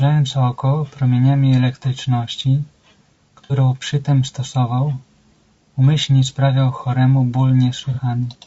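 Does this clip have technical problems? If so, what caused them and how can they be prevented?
Yes. All the way through, the speech has a rough, grainy edge, with noise filling in between the harmonics and a top end that sounds thin and a bit synthetic. That's most likely low-delay AAC compression, AAC-ELD, the kind video calls use, and the damage is plainly audible. Its short frames can't resolve pitch harmonics well, and at a low bitrate (this sounds like roughly 32 kbps) the encoder runs out of bits. Giving the call more bitrate, or using a codec with longer frames when low delay isn't critical, would prevent it.

There's also AAC frame loss with concealment in two spots: a smeared, noisy patch from 3.44 to 3.53 s, and a shorter one from 7.94 to 8.00 s. In each case the decoder lost data and patched the gap by reusing the last good spectrum with scrambled phase, so the sound turns phasey instead of dropping out. 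The first patch fits about 60 ms missing, which points to two lost frames, and the second fits a single frame of about 30 ms. A steadier network path, or forward error correction and a bigger jitter buffer on the link, would prevent it.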